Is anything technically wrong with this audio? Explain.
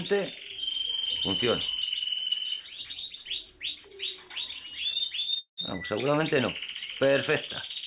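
Yes, two hiccups close together, both from packets arriving late on a call path that sounds like G.711 A-law, with nothing above 4 kHz.

First, a short stall from a late packet at 5.20–5.25 s. The jitter buffer ran dry, so the receiver stretched the last sound for about 24 ms until the packet showed up, then carried on where it left off. You hear a brief smear or held bit, with nothing missing.

Then a call audio freeze at 5.39–5.59 s, most likely from packets being held up in transit again. The receiver filled about 186 ms, carrying the last sound as a fading buzz or hiss that drops into roughly 100 ms of silence before the audio resumes from the same point, so a gap is inserted but nothing is lost.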